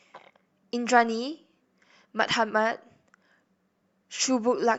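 Nothing in the recording reveals any technical fault.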